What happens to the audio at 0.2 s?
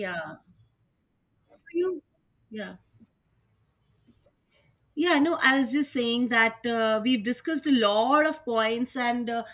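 Nothing goes wrong at 0.2 s; the speech there plays through intact, with no dropout, click or distortion.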